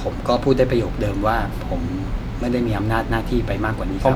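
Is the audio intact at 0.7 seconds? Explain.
Yes, the audio is intact at 0.7 s, with no fault at that moment.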